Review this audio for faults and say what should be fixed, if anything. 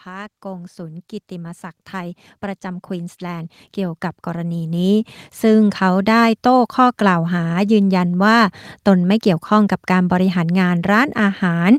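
Automatic gain rising runs from 0.05 s to 6.08 s: the AGC judged the input too quiet and ramped its gain up by about 17 dB, so the speech and the background noise swell together. Fix by setting a proper fixed input level, or a slower AGC with a sensible starting gain.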